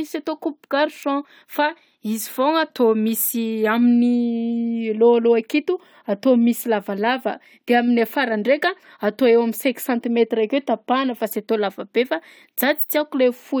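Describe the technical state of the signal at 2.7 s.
At 2.7 s the signal is intact, with no audible fault.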